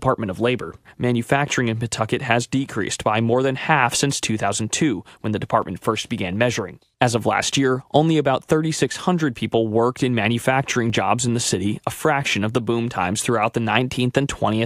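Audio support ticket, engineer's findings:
Clock drift buffer slips, 0.35 s to 13.54 s. Symptom: regular click or pop in the speech every 2.64 s, about seven in all. Likely cause: two devices on independent clocks, mismatched by a few hundred ppm. Buffer between them drifts until a small block, on the order of fifty samples, is dropped or repeated. Probable component: sample-rate handoff at an interface or converter boundary.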